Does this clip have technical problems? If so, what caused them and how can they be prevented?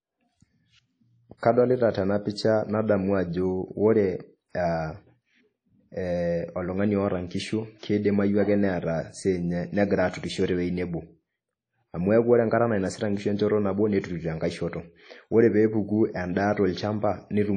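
Yes. Throughout the speech, a ringing, washy smear and hiss rise and fall with the signal, and nothing remains above 9.9 kHz. This is likely WMA compression at a low bitrate, around 32 kbps. Its long transform blocks spread quantisation noise over tens of milliseconds, and weak components drop out. The hiss breathing with the signal separates it from steady background noise. Encoding at a higher bitrate, or with a lossless format, would prevent it.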